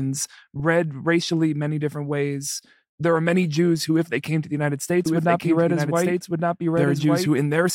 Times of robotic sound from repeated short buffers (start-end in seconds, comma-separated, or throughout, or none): none